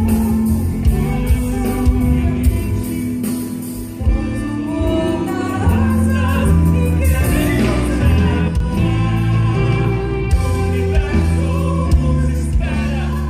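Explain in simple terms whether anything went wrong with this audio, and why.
Yes, there's a sudden gain jump from 8.48 to 8.60 s: everything, background included, abruptly drops quieter, likely from a volume setting switched instantly instead of faded.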